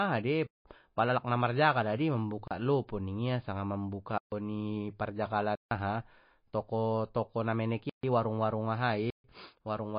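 Throughout, the speech has likely passed through low-bitrate MP3 compression, around 27 kbps. The encoder discarded weak frequency lines and everything above 5 kHz, so the codec damage is plainly audible as watery, swirly texture with smeared attacks and no upper treble.

Six blocks of digital silence occur at 0.46 to 0.65 s (186 ms, which fits an 8192-sample block), 2.48 to 2.51 s (32 ms), 4.18 to 4.32 s, 5.55 to 5.71 s, 7.90 to 8.03 s, and 9.10 to 9.24 s (about 140 to 160 ms). Each is a run of zeros, typically from an output buffer left unfilled, and the sound drops out and returns abruptly without any fade, leaving short holes.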